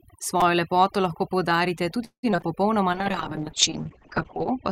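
A speech recording with overdone noise removal throughout: a noise reducer set far too aggressively pulls individual frequency bands down whenever they sit near its noise estimate. The background falls to near silence flecked with twinkling specks, and the softer parts of the voice are carved away with the noise. At 0.41 s, just before "lepoto lahko poudarite", there is a repeated buffer. Fresh audio arrived late, so the output replayed its last block three more times with a hard seam at each join. The repeat period is so short that it registers as a brief buzz or click rather than an audible stutter, which fits a buffer of about 5 ms. Essentially no audio was lost, since the replay only stalled playback. From 2.05 to 2.47 s, right after "lepoto lahko poudarite", repeated packet loss produces robotic sound. Packets went missing in quick succession, and each hole was patched by extending the preceding sound. 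About 231 ms of the stretch is synthetic fill, roughly 59 percent of it, with the longest gap at 182 ms. Another 60 ms is simply absent. The result is choppy and robotic, with pieces of speech dropping out. From 2.93 s to the end there is a call bitrate drop. The bandwidth estimate collapsed, and the sound points to the encoder falling from around 48 kbps to about 7 kbps. The coarser coding makes the speech rough and watery, and the audio bandwidth narrows from 20 kHz to 8 kHz, muffling the upper range for the rest of the clip.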